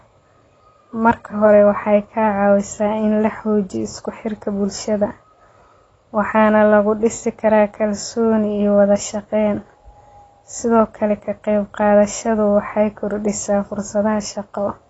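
From start to finish the speech sounds dull and smeared, with a warbling, fizzy edge on sibilants and nothing above 7.6 kHz. This is likely AAC compression at a low bitrate, around 24 kbps, where the encoder drops the top band and coarsely quantises the rest.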